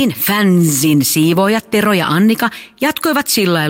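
No technical faults can be heard anywhere in this speech recording, and the signal stays intact and continuous throughout.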